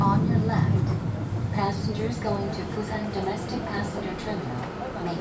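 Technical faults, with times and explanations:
There are no technical faults, so there are no times or explanations to give.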